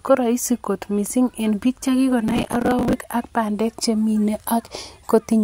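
From 2.28 to 2.93 s the speech breaks into processor overload crackle. Audio buffers of around 10 ms keep missing their deadlines, so stale fragments replay with hard edges and the sound turns to gritty tearing. A spectrogram shows dense vertical broadband streaks, and the waveform shows repeated abrupt discontinuities.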